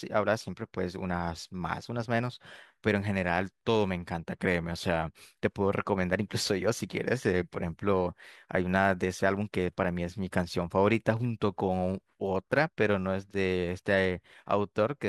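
A speech recording with nothing technically wrong with it.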